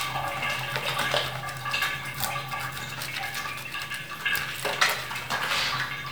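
Nothing stood out as a technical fault when listening to this recording of sounds.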